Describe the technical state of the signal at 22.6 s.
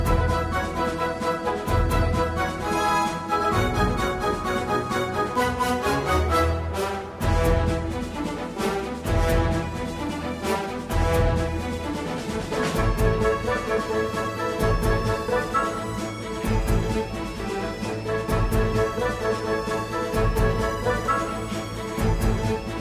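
The audio at 22.6 s is intact, with no technical fault present at that moment.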